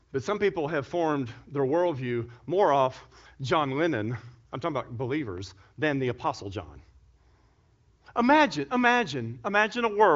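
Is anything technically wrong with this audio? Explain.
No, nothing's actually wrong here: it's speech carried over the AMR wideband (HD Voice) codec, which is why nothing reaches above about 7.6 kHz, and the speech stays clear at what sounds like one of the codec's higher bitrates, around 18 kbit/s.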